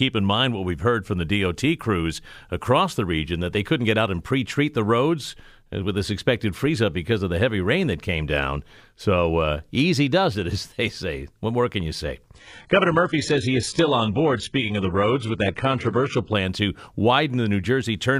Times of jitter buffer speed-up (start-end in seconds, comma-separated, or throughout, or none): none